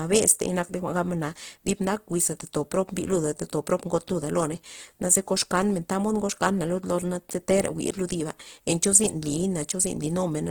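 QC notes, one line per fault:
Throughout, Opus compression: speech is plainly grainy and rough, tonal parts turned noisy, likely from an encoder filling starved bands with folded or noise content instead of leaving holes, so little swirl. Bandwidth stays full to 20.2 kHz; the grit fits roughly 16 kbps.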